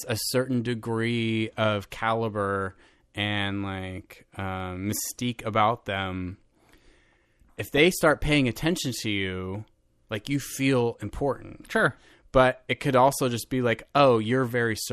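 Heavy low-rate coding, most likely MP2 compression at a bitrate in the region of 80 kbps, affects the whole of this speech recording. The encoder divides the signal into 32 sub-bands and, short of bits, shuts off the upper ones and coarsely quantises the rest, so the speech sounds plainly dull, with a granular, gurgling roughness and top-end detail that flickers in and out. From 7.65 to 7.92 s, just before "start paying attention to", DAB burbling appears: bit errors at a rate of roughly one in a thousand slip past error correction into the audio data. Across a short run of frames, corrupted samples in individual sub-bands put short blips of noise into the speech.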